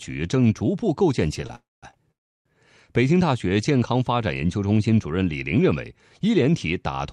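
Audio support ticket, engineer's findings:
Short stalls from late packets at 1.47–1.51 s and 1.91–1.95 s: sound held about 26–28 ms with a faint buzz or dip, jitter buffer stretching the last frame, nothing lost.

Call audio freezes at 1.55–1.85 s and 2.11–2.47 s: fading buzz or hiss, then silence of about 200 ms and 330 ms. Likely packets held up in transit and the jitter buffer ran dry. Playback resumes where it stopped.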